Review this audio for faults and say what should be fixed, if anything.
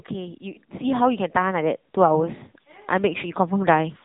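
The whole clip carries the AMR narrowband mobile codec. Nothing passes above 3.8 kHz, and the speech sounds plainly buzzy and synthetic because it is rebuilt from a vocal-tract model and sparse pulses. That damage fits a low mode of around 8 kbps. A spectrogram shows a hard ceiling at 3.8 kHz with smeared, grainy harmonics below it. Record or route the call over a wideband codec, or use a higher AMR mode, to prevent this.

Automatic gain rising occurs twice. From 0.11 to 2.4 s the level swells by about 9 dB, and from 2.96 to 4.0 s by about a further 3 dB. The gain control judged the input too quiet and kept turning it up, so speech and background grow together. On the waveform the envelope ramps upward across each span, and on the spectrogram everything brightens, noise floor included. Setting the input gain correctly and disabling or slowing the automatic gain control would prevent it.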